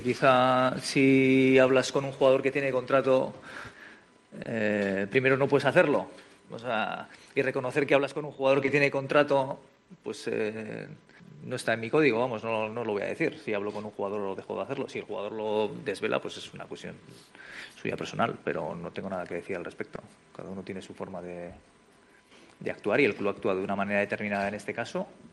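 At 4.43, 8.65, 12.63 and 19.95 s there is short concealed packet loss: each time about 20 ms of audio arrived too late, and the receiver filled the hole by extending the preceding sound before blending back. Unlike a hard dropout, nothing goes silent. Each event is a brief smear or wobble rather than a gap.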